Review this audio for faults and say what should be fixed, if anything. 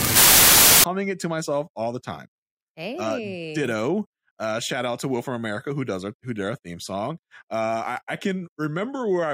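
Samples built from the wrong bytes, 0.00 to 0.84 s: the reader misassembles each sample's bytes, promoting fast-changing low bits, so the speech opening becomes loud, harsh broadband noise. Fix the byte order and alignment in the decoder, and verify the format before the stream starts.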